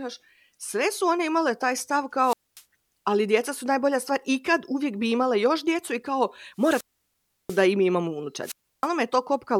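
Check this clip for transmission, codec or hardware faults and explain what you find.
The speech carries a wireless microphone squelch dropout three times: 2.22–2.63 s after "one imale taj stav" (about 0.24 s muted), 6.57–7.66 s after "još djecu i kao" (0.69 s), and 8.42–8.88 s after "i mi imamo" (0.32 s). Each time, the FM radio link weakens, hiss rises, and the receiver's squelch cuts the output to near silence until the signal recovers.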